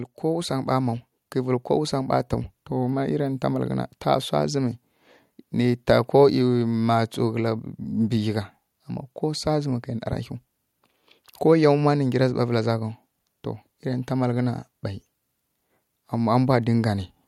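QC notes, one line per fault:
0.28–2.23 s, automatic gain rising: the gain control judged the input too quiet and ramped up by about 5 dB, so speech and background swell together.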